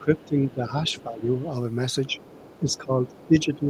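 Speech suppressed in double talk affects this speech recording from 0.0 to 1.28 s, briefly at 2.07 to 2.19 s, and from 2.6 s to the end. The talker's level sinks by around 10 dB, and by a milder 5 dB or so in the short middle dip, likely because the echo canceller, hearing both sides at once, turned everything down. The other side's voice leaking through is audible at 0.17 to 0.52 s, 0.87 to 1.03 s, 1.37 to 1.46 s and from 2.07 s to the end. It sits roughly 25 dB under the talker, fainter still near 1.4 s, and is likely loudspeaker playback the canceller failed to remove from the microphone.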